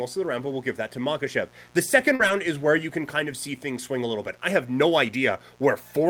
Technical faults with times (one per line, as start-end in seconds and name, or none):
0.00-6.10 mains buzz
2.15-2.21 short concealed packet loss
2.19-2.29 lost packet rebuilt from error correction